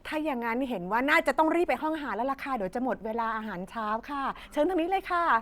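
No technical faults can be heard anywhere in the speech. There is no moment in the audio where a listener could point to something going wrong.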